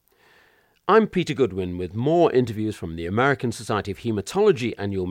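No technical faults can be heard anywhere in the speech recording. There is nothing to place on a timeline, so no times or values apply.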